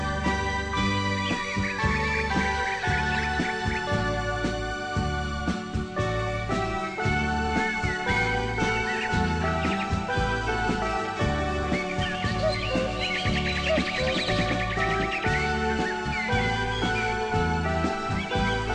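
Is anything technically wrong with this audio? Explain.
No, nothing technically wrong can be heard in this audio. There is no technical problem to explain.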